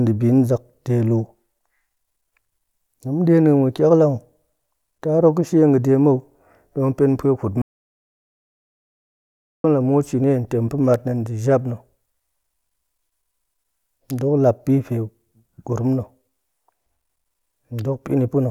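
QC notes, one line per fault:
7.62–9.64 s, audio dropout to silence: the input feeding the recorder was most likely lost, through a disconnected device, a failed link or an accidental mute, while the file kept being written with silence. The speech stops abruptly mid-flow and about 2.0 s of dead silence follows, with no room tone underneath, before the audio resumes on "la muut shini". Whatever was spoken in that gap is unrecoverable.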